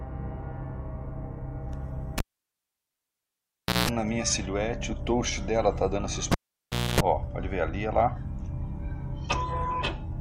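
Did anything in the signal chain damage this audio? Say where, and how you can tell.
Yes, in the analogue wiring: a cable pulled and plugged in, at 2.18–3.89 s and again at 6.32–7.00 s. Each time the waveform spikes with a pop, then goes nearly flat for 1.66 s and then 0.64 s. A 60 Hz buzz follows as the tip touches first, appearing as stacked harmonic lines on a spectrogram, and a second pop brings the sound back.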